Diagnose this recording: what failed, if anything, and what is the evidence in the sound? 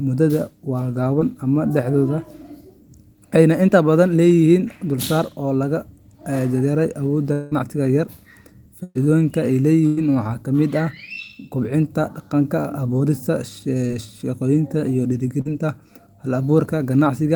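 Brief smears in the speech at 1.19–1.23 s, 13.87–13.91 s and 15.41–15.47 s point to short concealed packet loss at the network stage. Roughly 20, 20 and 40 ms of audio never arrived, and the decoder bridged each gap by extending the preceding sound.

From 7.33 to 7.53 s the speech turns into a fading continuation of the last sound, about 180 ms long, with no silent stretch. It then resumes further on with that part missing. The likely cause is a long network dropout, where the receiver synthesises audio until real packets return.

Two fading continuations of the last sound at 8.83–8.97 s and 9.87–9.99 s are bursts of packet loss on the network. About 120 ms and 100 ms of speech went missing. The first burst decays into roughly 20 ms of silence before the audio picks up again.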